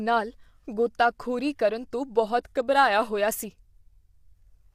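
From start to finish the speech carries plainly audible coding damage, likely from low-delay AAC compression of the AAC-ELD kind used in video calls. The codec works in very short frames. At this bitrate there are too few bits to code each frequency line finely, so noise fills the gaps between the voice's pitch harmonics. The voice sounds rough and grainy. The top band is thin and somewhat synthetic. The damage fits a modest bitrate, around 32 kbps.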